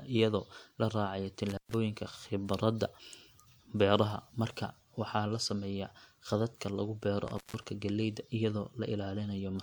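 At 1.49 to 1.74 s and again at 7.28 to 7.63 s the speech drops out through an intermittent contact, a loose connection briefly opening for about 120 ms and 160 ms. Each gap has crackle at its edges and faint hiss inside. On a waveform it shows as near-flat stretches bounded by sharp spikes, and on a spectrogram as dark gaps with broadband vertical streaks at each edge.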